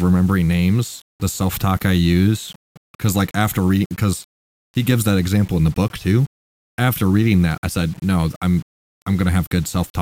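Speech runs throughout with grainy distortion that rises and falls with the voice, about 30 dB below it, and quiet tails sputter or drop out, likely from low bit depth without dither, rounded to 7 bits. Unlike dithered noise, it isn't a steady hiss.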